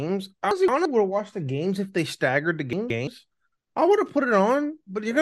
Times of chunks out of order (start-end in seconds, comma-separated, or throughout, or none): 0.51-0.85, 2.73-3.07